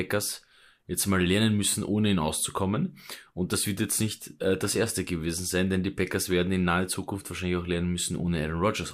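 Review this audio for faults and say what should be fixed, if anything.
No faults are audible here; nothing needs fixing.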